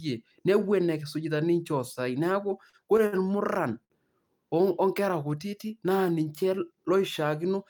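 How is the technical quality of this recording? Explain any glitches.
The speech has three brief glitches, all of one kind. They are short stalls from a late packet, at 2.69–2.75 s, 3.06–3.14 s and 3.84–3.92 s. Each time a packet arrived late and the jitter buffer ran dry. The receiver held the last sound for 38, 58 and 58 ms, then resumed where it left off. Nothing is lost. A sound just drags briefly, with a faint buzz or dip.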